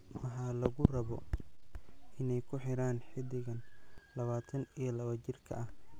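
The zero line of this speech recording shifts twice, a DC step of about -44 dBFS: at 0.67 s, just before "lawatan iyo", returning at 3.98 s, and again at 5.53 s, holding to the end. Each jump gives a low thump beneath the unchanged speech.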